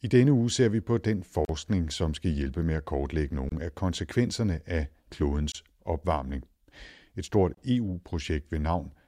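Short dropouts cut into the speech at 1.45 s, 3.49 s, 5.52 s and 7.55 s, one every 2 s. The first lasts about 42 ms and the others about 27 ms each, with smeared edges before the sound resumes where it left off. These are gaps at joins of encoded pieces: the audio was encoded in separate chunks and spliced untrimmed, so each join keeps the encoder's start-up silence and final-frame padding.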